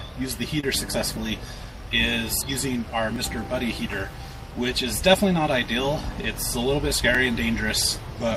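At 0.60 to 0.64 s there's short concealed packet loss: about 20 ms of audio never arrived, and the decoder papered over it with 25 ms of extrapolated sound, leaving a quick smear. At 3.16 s and again at 7.15 s the audio jumps, skipping a handful of milliseconds with no silence in between, likely audio missing between chunks from a recorder working in 2-second blocks.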